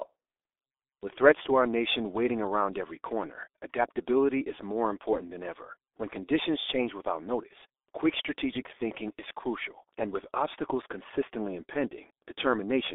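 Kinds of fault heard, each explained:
G.723.1 codec: low-rate telephony coding around 6.3 kbit/s in 30 ms frames, band-limited to roughly 300 Hz–3.6 kHz, leaves this speech muffled, hoarse and heavily smeared in its consonants throughout.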